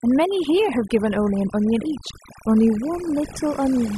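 A speech clip hit with overdone noise removal throughout, from start to finish. A noise reduction stage was pushed far too hard, so any frequency band sitting close to its noise estimate gets pulled down or shut off entirely, and the softer parts of the voice are caught along with the noise. The pauses collapse into near silence sprinkled with twinkling specks.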